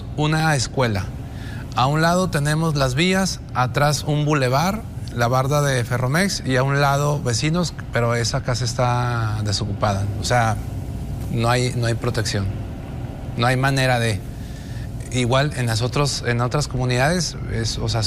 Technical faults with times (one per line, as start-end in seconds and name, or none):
0.40-17.28 clock drift buffer slips